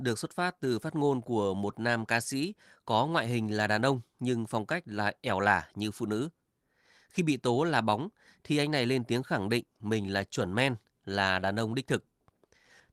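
No technical faults are audible in this recording.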